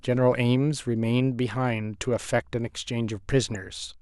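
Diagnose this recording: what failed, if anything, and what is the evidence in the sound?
DAB burbling in the codec stage, from errors on the broadcast link. From 3.50 to 3.56 s the speech picks up a brief burst of short noise blips in single sub-bands. Weak reception let a small fraction of a percent of bits slip past error correction, corrupting the MP2 audio data across what sounds like a handful of frames. Unlike a dropout or packet-loss concealment, nothing goes silent or repeats. The artefact is spectral warbling layered over continuing audio.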